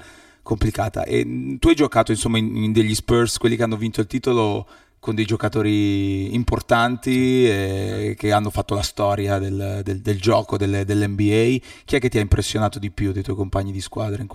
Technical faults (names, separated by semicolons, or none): channel delay (comb filtering)